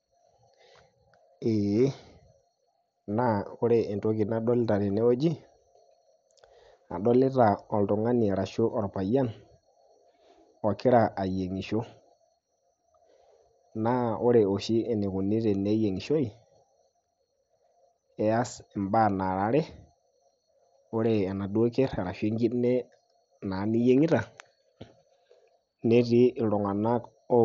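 Nothing in this speech recording stood out as a problem on listening.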